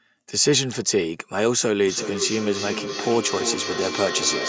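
From 1.87 s to the end at 4.49 s, a second device in the same room is playing the call back into a microphone, and the microphone's echo canceller can't remove sound its own device didn't play, so a feedback echo between two devices sets in. The speech returns roughly every third of a second, thinner and ringing, peaking at about 7 dB below the direct speech, over audio that already stops at 8 kHz from the call's microphone processing.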